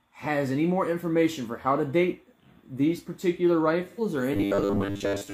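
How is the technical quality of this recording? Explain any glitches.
The recording has two clear faults late in the clip.

From 3.89 to 4.00 s there is a brief smeared, noisy patch: AAC frame loss with concealment, where the decoder rebuilt about 85 ms, consistent with two missing frames, from the preceding spectrum.

From 4.33 to 5.33 s the audio turns into a rigid metallic buzz at 100 Hz, robotic sound likely from repeated short buffers, with roughly 10 ms chunks replayed in place of most of the real audio.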